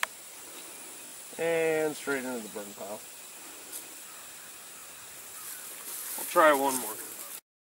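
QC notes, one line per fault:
1.06–1.12 s, repeated buffer. A short piece of sound plays three extra times with hard joins, a brief stutter that fits a 20 ms buffer. Roughly 70 ms of new audio is lost.
4.80–4.82 s, repeated buffer. One 20 ms piece plays twice in a row, with a hard join at the repeat. Roughly 20 ms of audio is lost.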